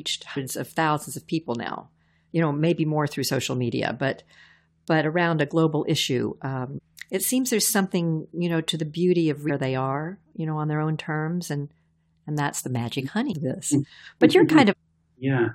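A brief glitch cuts into the speech at 0.36–0.38 s, just before "of thousands of people", then again at 6.77–6.79 s between "around a global issue" and "it seems there's something", at 9.49–9.51 s, at 13.32 s after "and that's the magic", and at 14.71–14.73 s. Each is damaged data in a compressed stream: corrupted bytes make the decoder misread a frame, lose sync and skip ahead to the next header.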